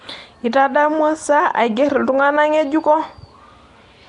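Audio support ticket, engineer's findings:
Rough, hissy halo and smeared, underwater quality on the speech, whole clip. Nothing above 10.6 kHz. Likely Nellymoser compression: coarse bit allocation starves weak bands, which get noise-filled. Sounds like a stream around 44 kbps.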